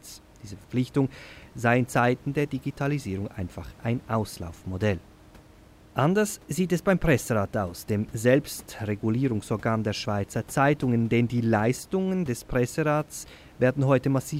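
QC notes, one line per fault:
Nothing to flag here, just a faint bit of room sound sitting about 26 dB under the speech the whole way.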